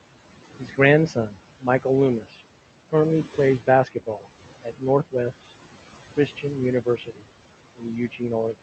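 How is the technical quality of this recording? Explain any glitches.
The recording is compromised by an over-aggressive noise suppressor. It leaves processing artifacts across the whole clip and swallows parts of the speech in two stretches, all heard through a call codec whose spectrum stops near 8 kHz.

Noise suppressor artifacts run throughout. The suppressor pulls down the room noise, which sits about 16 dB under the speech, by about 17 dB in the gaps, frame by frame. On a spectrogram the background looks blotchy and flickers between words.

Speech cut by the noise suppressor occurs from 0.59 to 5.14 s, adding up to about a second of affected sound, and again from 6.16 s to the end. Quiet consonants and word endings were mistaken for noise and lowered by up to about 16 and 18 dB, so they sound clipped off or faint. In the waveform, syllable tails drop abruptly, and the spectrogram shows holes in the high-frequency consonant energy.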